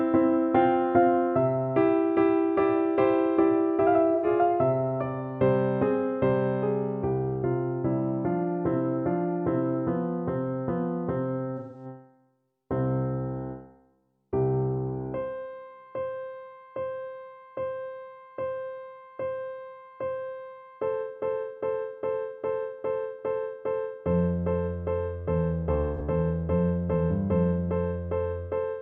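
Three brief smeared, noisy and phasey patches break up the audio at 4.15–4.27 s, 11.57–11.85 s and 25.95–26.01 s. This is AAC frame loss with concealment: the decoder rebuilt the gaps from the last good spectrum, with losses of roughly 85, 171 and 43 ms, consistent with two, four and one lost frames.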